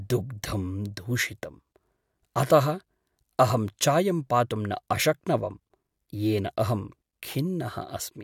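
No technical faults can be heard in the speech here. Nothing in the recording calls for a time marker or a diagnosis.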